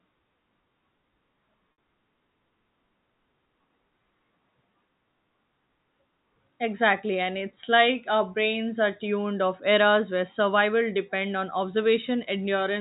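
At 1.73 s there is packet loss with pitch repetition: about 60 ms of the stream goes missing, a gap that fits three 20 ms packets, and the receiver fills it by repeating the last pitch period while fading it out. This is long enough that the held, buzzy tone decays into a brief silence before the speech resumes through a short cross-fade. The G.711 telephone coding carrying the call keeps everything under 4 kHz, with only faint quantisation noise.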